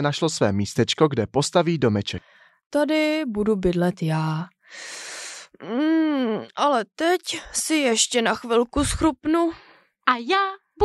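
A speech recording with nothing technically wrong with it.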